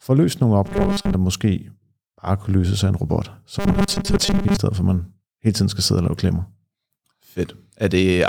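From 0.66 to 1.14 s, after "få løst nogle", and 3.59 to 4.57 s, after "af en robot så", the speech turns into robotic sound from repeated short buffers: a rigid 200 Hz metallic buzz, likely from the last 5 ms being repeated in place of most of the audio. Unlike dropouts, nothing goes silent, and the buzz follows the speech only roughly.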